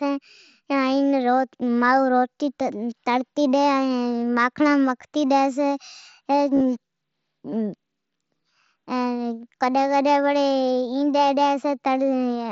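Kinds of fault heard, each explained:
Concealed Bluetooth headset packet loss: near 6.55 to 6.61 s, short dropouts totalling 37.5 ms across 60 ms, none longer than 15 ms, were filled by repeating the best-matching recent waveform. This gives a brief buzzy roughness, with repeated cycles in the waveform and smeared harmonics on a spectrogram.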